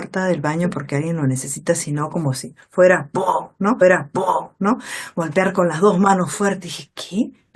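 At 3.81 s the speech jumps back and replays about one second of what was just heard, running again until 4.81 s, with a small blip at the point where it snaps backwards. This is a stream segment repeated: the player fetched or queued the same chunk of the stream twice and played both copies in turn. The duplicate adds about 1.0 s to the running time, so everything after it arrives correspondingly late.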